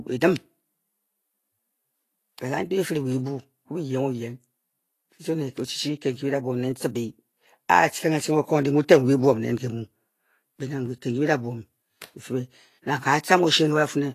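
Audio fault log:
Throughout, Vorbis compression: nothing reaches above 14.2 kHz, and the treble sounds hissy and grainy, with roughened tones and blurred onsets. The likely cause is low-rate Vorbis coding near 33 kbps, which quantises high-band detail into noise of similar energy.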